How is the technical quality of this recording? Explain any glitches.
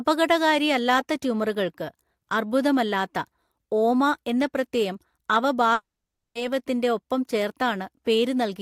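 The recording has one clear glitch, a long network dropout in the speech from 5.73 to 6.36 s. The stream likely stopped delivering audio for about 0.62 s, and the receiver had nothing to play. It briefly stretched the last sound into a fading buzz, then gave way to roughly 0.54 s of silence. When the speech resumes at 6.36 s, the missing stretch is simply gone, leaving an audible jump in the flow.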